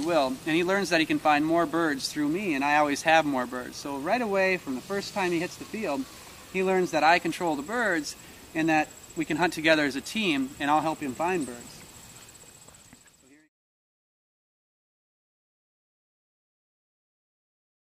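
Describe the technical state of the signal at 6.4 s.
The signal at 6.4 s is intact, with no audible fault at that moment.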